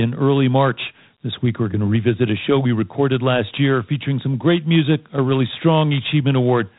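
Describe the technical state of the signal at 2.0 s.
At 2.0 s, as throughout the clip, the speech has passed through Dialogic VOX ADPCM, a 4-bit adaptive differential coder that stores each sample as a coarse step from a running prediction, which fits a rate of 32 kbps. The quantisation error from those coarse steps becomes a plainly audible gritty hiss that tracks the speech. The band stops at 3.8 kHz, so the voice sounds dull, telephone-narrow and roughened.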